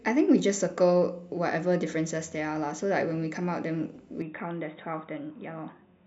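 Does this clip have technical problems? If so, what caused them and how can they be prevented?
Yes. From 4.22 s to the end, the speech abruptly turns dull and boxy, drops about 5 dB in level, and gains a faint new background noise well below the speech, with no gap at the change. This is likely an input switched to a poorer device mid-recording, with the replacement passing nothing above 3.8 kHz. A spectrogram would show the upper band cut off cleanly at 4.22 s, and the waveform would step down slightly there. Locking the input device in the recording settings would prevent this.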